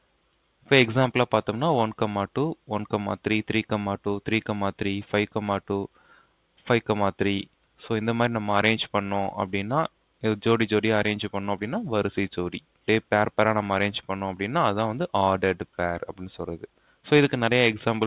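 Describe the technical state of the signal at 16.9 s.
From 16.62 to 17.05 s the sound sinks by up to about 12 dB, cut by the noise suppressor, which mistook it for noise.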